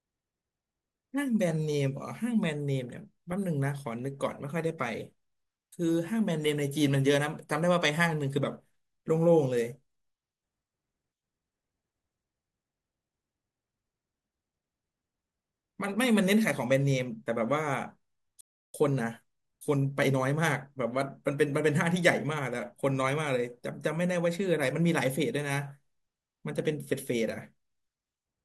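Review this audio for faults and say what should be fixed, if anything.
Playback stall at 18.41 to 18.74 s: the speech cuts to silence mid-flow for about 333 ms before sound returns. The likely cause is the player's buffer running dry or its audio thread being blocked. Keep a larger playback buffer and run audio on a dedicated high-priority thread.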